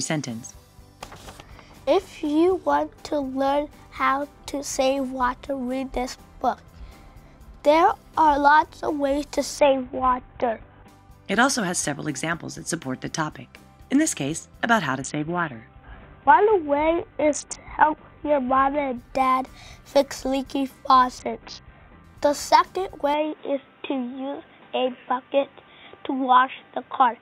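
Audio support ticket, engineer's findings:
Bluetooth SBC bit pool drop, three times: 9.58–10.88 s, 15.01–18.97 s, 21.18–22.04 s. Treble goes dull and gritty noise comes up, then clears. Sounds like the link got congested and the bit pool fell from 28 to 5, which fits roughly 54 kbps.

Input switched to a poorer device at 23.14 s, lasting to the end. No gap, no level jump, but everything above 3.8 kHz is gone and a new noise floor sits around 35 dB down. Likely the system jumped to another mic or a headset call profile.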